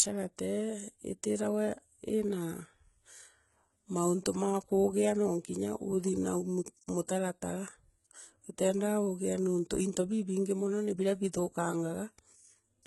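Speech throughout, with sibilants that sound gritty, metallic and lispy, a treble that is synthetic, and nothing at all above 11.8 kHz. This heavy damage likely comes from HE-AAC compression at a very low bitrate, around 16 kbps, which rebuilds the upper band from copied lower bands whose harmonics no longer line up.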